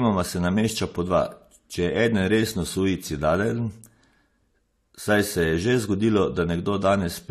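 Throughout the speech, nothing sounds above 14 kHz, and two distinct kinds of coding artefacts overlap. This points to transcoding between lossy codecs, likely Vorbis re-encoded as low-bitrate AAC-LC, each pass adding its own artefacts.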